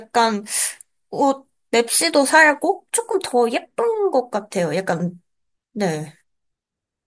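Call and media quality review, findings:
No fault found in the speech signal: level, continuity and timing hold steady throughout, with nothing to trace to capture, processing or transport.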